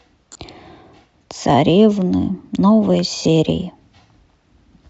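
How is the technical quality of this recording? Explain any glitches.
Technical quality is compromised by codec coloration throughout and two brief dropouts.

Throughout, the speech has a breathy, grainy top end, with noise standing in for upper detail. The likely cause is Bluetooth LC3 compression at a modest bitrate.

From 0.33 to 0.35 s, and again at 3.24 s, lost LE Audio frames leave gaps of about 22.5 and 15 ms. The decoder repeats the previous spectrum with scrambled phase, producing a short noisy smear.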